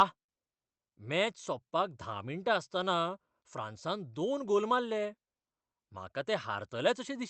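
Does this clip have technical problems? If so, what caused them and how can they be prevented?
No, there's nothing wrong to flag in this speech clip, since it came through the call path the way that path normally sounds, so there's nothing that needs preventing.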